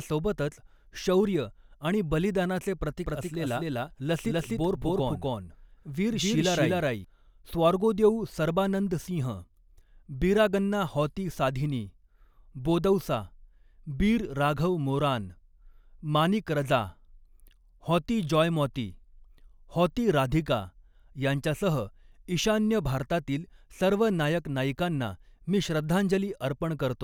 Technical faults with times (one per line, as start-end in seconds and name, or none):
3.06-7.04 doubled audio track